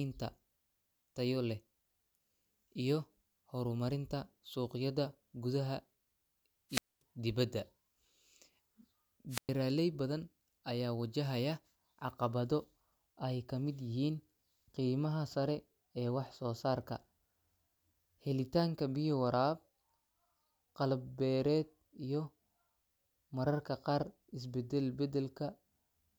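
At 6.70 s the speech breaks up in a wireless microphone squelch dropout. Hiss rises as the radio signal fades. The receiver's squelch then mutes the output for about 230 ms. The voice returns at 7.02 s. A shorter dropout follows at 9.29 s, muting for about 110 ms.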